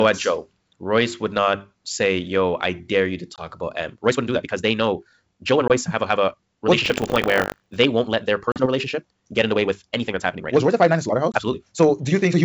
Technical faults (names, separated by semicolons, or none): packet loss on an ADPCM call; time-stretched section; buffer tearing